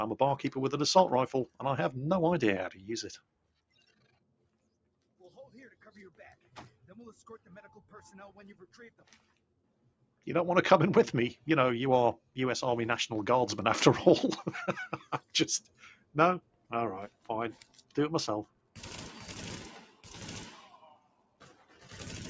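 A noise suppressor applied to music or sounds runs for the whole clip. Built for speech, it treats steady tones and tails as noise. Levels swing by about 15 dB, so the sound pumps and thins.

The sound is cut by the noise suppressor at 2.73–8.09, 8.54–10.27, 12.18–12.37, 15.04–16.72, 17.08–17.97, 18.45–18.80, 19.73–20.17 and 20.48–21.95 s. Held and fading parts sink by about 12 to 16 dB. Decays end early, while sharp onsets still come through.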